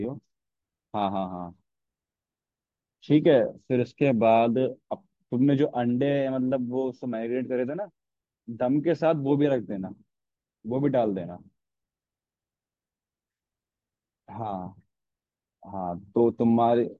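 No technical faults are audible.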